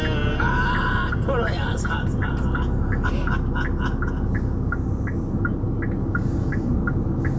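No technical faults can be heard anywhere in the recording. It has been through a call's microphone processing, so the lowest bass is trimmed and nothing reaches above 8 kHz.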